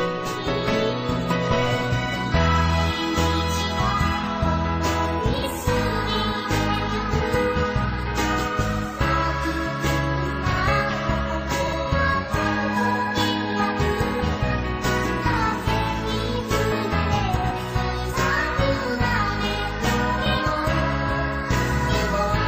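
Brief garbled flutters occur at 5.34–5.44 s, 11.63–11.73 s and 17.36–17.52 s. These are frames out of order: neighbouring blocks of 46.4 ms (69.7 ms in the last) were decoded swapped, so no time is lost.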